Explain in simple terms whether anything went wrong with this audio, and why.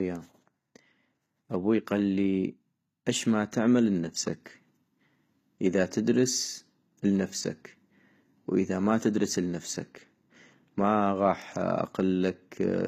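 Something did go wrong. Throughout the speech, s sounds come out gritty and metallic, and nothing is left above about 15 kHz. The likely cause is HE-AAC compression, which rebuilds the treble from copied lower sounds. Plain muffling would only dull the sound, not roughen it.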